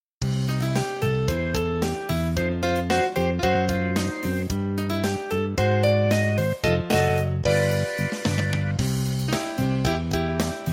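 No technical faults can be heard anywhere in the recording.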